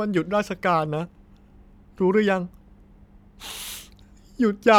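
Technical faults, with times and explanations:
Nothing here calls for a timestamp, since no technical faults turn up anywhere in the audio.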